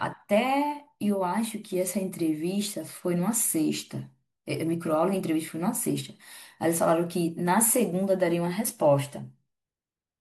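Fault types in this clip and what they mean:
No technical faults can be heard in the speech. Nothing in the audio points to a problem in how it was captured, processed or delivered.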